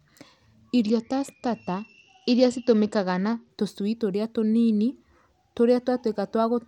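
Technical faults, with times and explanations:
0.82 to 3.50 s, Bluetooth SBC bit pool drop: the speech turns dull and gritty as the link struggles, which fits the bit pool falling from about 28 to 9. The top sub-bands lose their bits and lower ones are coarsely quantised, until the rate recovers.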